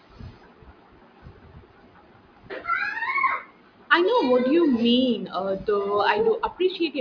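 No technical faults can be heard anywhere in the recording; the signal holds steady throughout.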